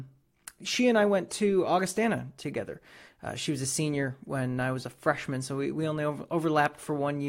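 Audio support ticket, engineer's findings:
No faults found on listening.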